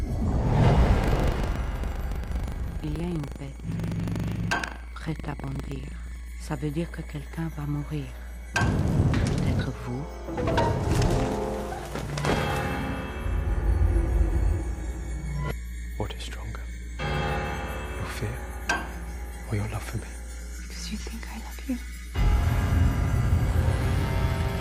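From 1.0 s to 6.32 s there is buffer tearing. The software filling the playback ring buffer and the hardware reading it have drifted out of step. Each period, the read point crosses the write point. So roughly a tenth of every buffer replays sound from about 100 ms earlier, joined hard on both sides. The result is a steady robotic buzz at 25 Hz, which fits a 40 ms buffer period. It is heard only while sound is present.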